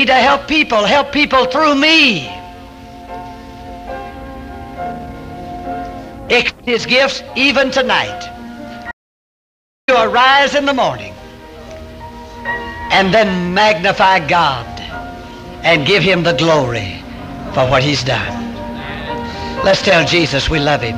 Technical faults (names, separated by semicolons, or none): audio dropout to silence